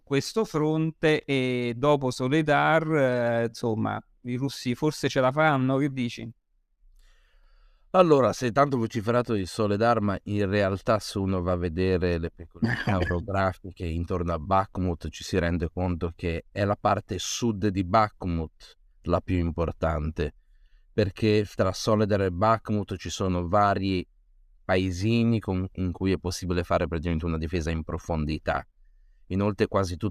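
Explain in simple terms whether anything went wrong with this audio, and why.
Nothing went wrong with the recording itself: the speech comes through steady and unbroken, with no technical faults to be heard anywhere along the way.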